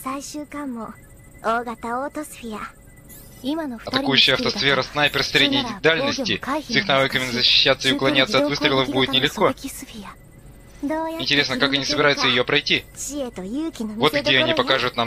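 No technical faults can be heard anywhere in the audio. There is nothing to place in time and nothing to measure.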